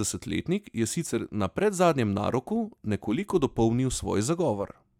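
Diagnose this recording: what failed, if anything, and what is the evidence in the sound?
Nothing failed; no faults heard.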